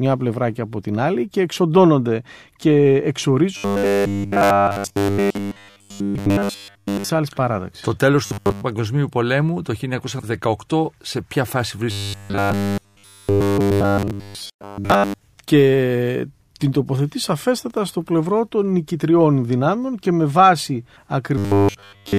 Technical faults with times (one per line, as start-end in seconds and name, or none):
3.57-7.09 robotic sound from repeated short buffers
8.26-8.64 robotic sound from repeated short buffers
11.91-15.19 robotic sound from repeated short buffers
21.38-22.18 robotic sound from repeated short buffers